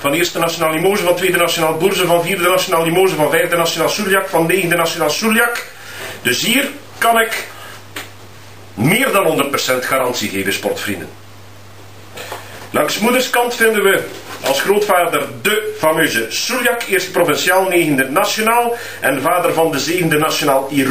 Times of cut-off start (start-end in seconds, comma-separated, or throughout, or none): none